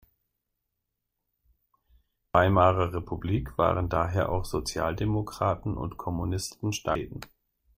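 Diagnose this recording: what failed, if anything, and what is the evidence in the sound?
Damaged data in a compressed stream, at the codec stage: brief glitches at 2.35 s and 6.95 s as the decoder misreads corrupted frames.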